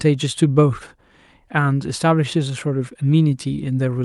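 Nothing technically wrong turns up anywhere in this short bit of speech, so there's nothing to flag here.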